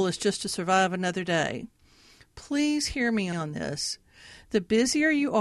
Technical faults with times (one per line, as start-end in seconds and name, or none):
3.32-3.37 repeated frames